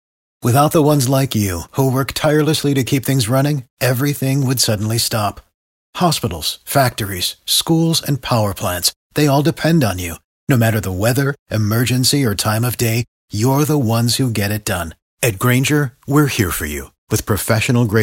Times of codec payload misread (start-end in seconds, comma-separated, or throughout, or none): none